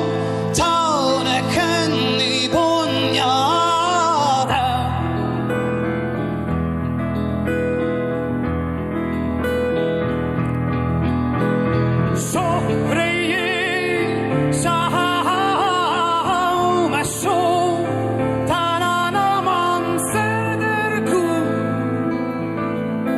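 Channel delay (comb filtering) runs from 4.43 s to the end at 23.17 s. One channel lags the other by roughly 0.1 ms, and summing them to mono cancels shared content at evenly spaced frequencies, the first near 5 kHz, leaving a hollow, phasey colour.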